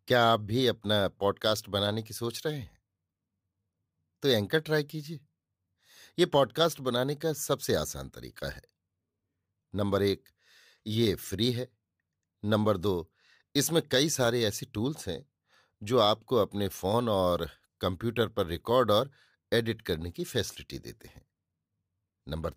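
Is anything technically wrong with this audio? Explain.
No, nothing technically wrong can be heard anywhere in this speech recording.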